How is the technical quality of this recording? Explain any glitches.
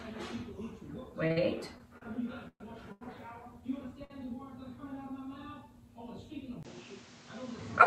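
The recording has several timing glitches and one change in tone near the end.

Short stalls from a late packet occur at 1.27 to 1.32 s, 1.32 to 1.38 s, and 4.04 to 4.12 s. Each time, a packet was late and the jitter buffer ran dry. The receiver held the last sound for 25, 43 and 57 ms, then resumed. Nothing is lost, but the sound briefly drags.

Repeated stalls (stutter) run from 1.78 to 3.03 s. Packets kept arriving late, so the buffer emptied five times. The receiver stretched the sound for 269 ms in total, about 22 percent of that stretch. The longest hold is 121 ms. The audio stutters and drags.

At 6.63 s, the input was likely switched to a poorer device. There is a 20 ms silence at the switch. After it, nothing is heard above 8.4 kHz, so the sound turns duller. The level shifts by roughly 5 dB. A new background noise sits roughly 30 dB below the signal.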